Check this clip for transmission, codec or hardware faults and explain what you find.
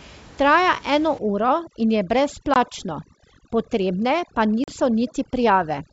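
Two faults are audible: overdone noise removal and packet loss on an ADPCM call.

Overdone noise removal runs from 1.19 s to the end. The noise reducer is set far too aggressively, so every frequency band that comes close to its noise estimate is pushed down or switched off. The room noise, which sits about 25 dB below the speech, is removed and replaced by near silence with twinkling specks. Softer parts of the speech fall under the same threshold and disappear with it.

Packet loss on an ADPCM call happens twice, at 2.54 to 2.57 s and again at 4.64 to 4.73 s. The first dropout loses 20 ms of audio, which fits a single missing packet. The second loses 40 ms, which points to roughly two. Each missing stretch is filled with silence, which leaves a hole with abrupt edges. During the gap the decoder's adaptive predictor and step size drift away from the sender's. When audio returns, it comes back slightly distorted, and it takes some tens of milliseconds to settle.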